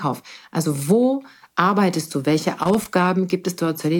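At 2.63 s the speech is broken up by loose connector crackle lasting until about 2.85 s, roughly 0.22 s in all. It sounds like an irregular burst of scratchy crackle laid over the signal. The cause is a worn or dirty contact in the signal path that rapidly makes and breaks as it shifts. Each break chops the audio, and any DC present on the line turns those interruptions into pops.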